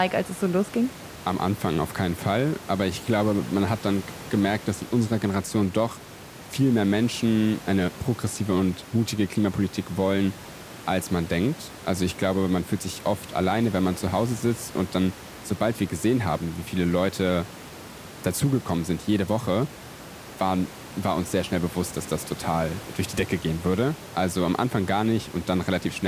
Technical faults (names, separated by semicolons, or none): none